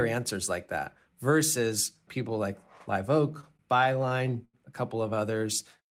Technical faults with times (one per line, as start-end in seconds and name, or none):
3.32-4.55 repeated stalls (stutter)
5.38-5.88 jitter buffer slow-down